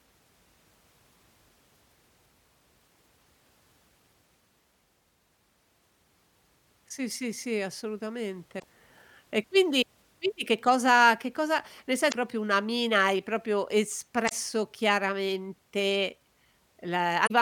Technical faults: damaged data in a compressed stream

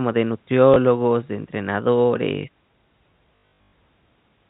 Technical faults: packet loss with last packet repeated

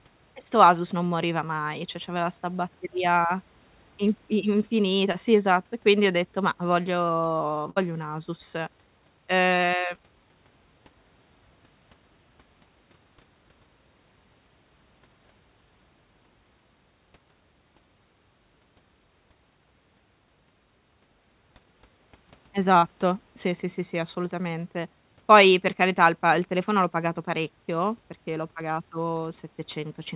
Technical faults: short concealed packet loss; burst of packet loss

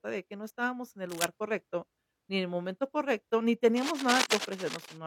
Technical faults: cable scratch noise

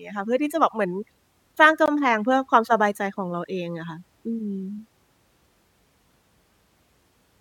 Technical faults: gap between stream segments

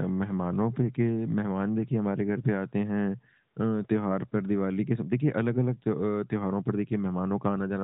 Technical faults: none

